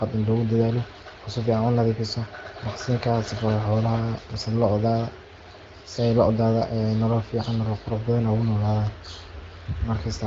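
No technical faults can be heard in this speech clip. It carries the band-limited character of AMR wideband (HD Voice) coding, with only light codec colouring, which fits one of the higher rates around 16 kbit/s.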